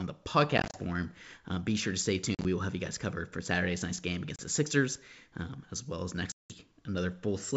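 Packet loss on an ADPCM call knocks the decoder's predictor and step size out of step with the sender's. Each gap is a hard-edged silent hole, and the speech comes back with brief distortion, at times with a click or at the wrong level. This happens at 0.58–0.78 s (about 100 ms lost in runs of up to 30 ms), at 2.35–2.46 s between "be sure to stay" and "will have you guys", at 4.36–4.41 s after "nice game", and at 6.32–6.57 s after "um as well as".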